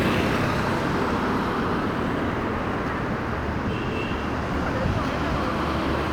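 Nothing faulty can be heard anywhere in this recording of sounds. At no point does the audio give any sign of trouble in how it was captured, processed or played back.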